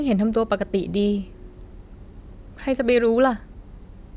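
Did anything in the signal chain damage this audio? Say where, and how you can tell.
No, nothing in this speech stood out on listening as damage from any stage of the signal chain.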